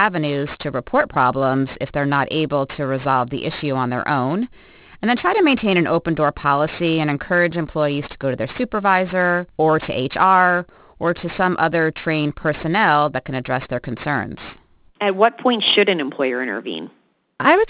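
A speech clip with aliasing throughout: downsampling to 8 kHz without an anti-alias filter folds energy above 4 kHz back down, leaving gritty, metallic sibilants, with the folded products roughly 20 dB below the signal.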